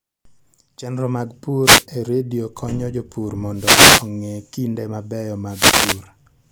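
Speech with three wireless microphone noise hits at 1.62–1.86 s (before "e redio konyo jopur"), 3.53–4.10 s (before "kinde mabeyo") and 5.47–6.04 s: static swishes as the FM radio signal fades, unlike a digital dropout's abrupt silence.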